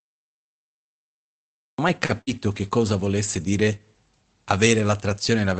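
Speech carried over an Opus call path, band-limited to about 8 kHz, opens with a cut-off start: the first 1.78 s is digital silence, and the audio then begins abruptly mid-sound at 1.78 s with no natural attack, because capture or streaming started late. At 2.05 s a short stall from a late packet follows: the jitter buffer ran dry, so the receiver held the current sound for about 38 ms until the packet arrived, then resumed from the same point, leaving a briefly stretched, slightly buzzy sound with nothing lost. A burst of packet loss follows at 2.21 to 2.30 s. The receiver extended the last sound for about 56 ms while fading it, then jumped ahead, so roughly 60 ms of speech is missing and the held tail sounds like a decaying buzz or hiss. Three separate losses were covered as lost packets rebuilt from error correction, at 2.09, 2.27 and 2.57 s, each spanning 60 ms. In each case the decoder played the low-bitrate redundant copy carried in the following packet, so there is no gap, but those stretches sound rougher and noisier than the surrounding audio.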